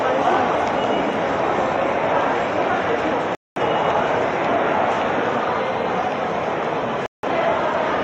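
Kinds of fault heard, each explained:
Digital broadcast dropout, at 3.35 to 3.60 s and 7.06 to 7.27 s: the receiver stopped getting usable digital frames, either because the signal vanished or because frames failed their error check, so it muted until valid data returned. Each gap is a quarter of a second or less, and the sound drops to silence and then resumes further along. About 210 ms and 170 ms of programme are missing, consistent with a handful of lost frames each time.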